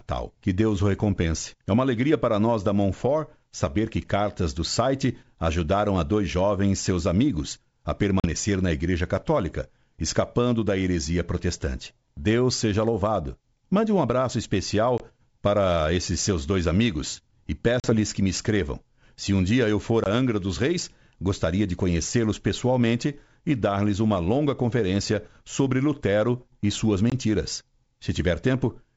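Packet loss on an ADPCM call breaks up this speech five times: at 8.20–8.27 s, 14.98–15.01 s, 17.80–17.94 s, 20.04–20.06 s and 27.10–27.13 s, losing about 40, 20, 40, 20 and 20 ms of audio, roughly one or two packets each. Each dropout is a hard-edged silent hole. Afterwards the decoder's adaptive predictor and step size no longer match the sender's, so the speech returns with brief, slight distortion before settling. The wideband G.722 path stays clear up to about 7 kHz.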